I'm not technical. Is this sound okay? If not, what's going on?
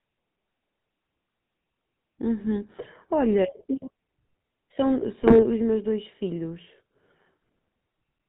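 No. The speech has passed through the GSM full-rate codec, the compression used by early mobile phones, for its whole length. That system rebuilds the voice from a simplified model of the throat and mouth, driven by a coarse train of pulses, and it discards everything above 4 kHz. The result you hear is a muffled, buzzy, gravelly tone, with the crisp edges of consonants dulled, and the damage is plainly noticeable.

There is also a short burst of GSM bit errors from about 5.22 to 5.44 seconds. On a poor mobile connection, some of the data describing the sound arrives corrupted, and the decoder faithfully rebuilds the wrong thing. For that fifth of a second, the voice's tone and loudness are thrown off, so the speech breaks up into a brief gargling, squawky, popping disturbance before it settles back into the steady buzzy codec sound.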